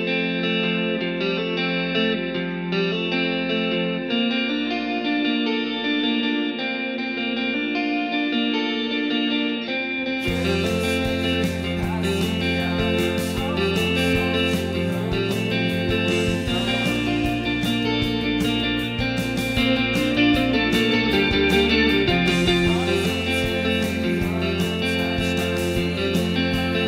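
No technical faults are audible.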